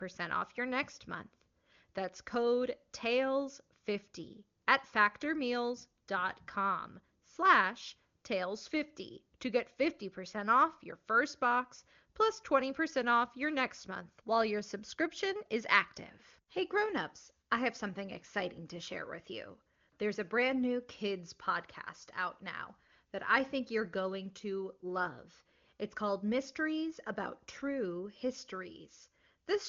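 Nothing technically wrong turns up in this speech clip; it has the bandwidth of an AMR wideband (HD Voice) call, with the top end stopping at about 7 kHz, and the codec at what sounds like one of its higher rates leaves little audible trace.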